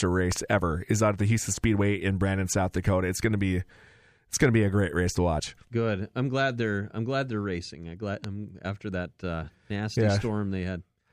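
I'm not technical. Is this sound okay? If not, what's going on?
No, there's a loud pop, a sharp double pop at 0.32 to 0.38 s before "ever is out at", and another at 8.24 to 8.26 s after "they're racing I glad". It's likely a plug, switch or static jolt hitting the recording.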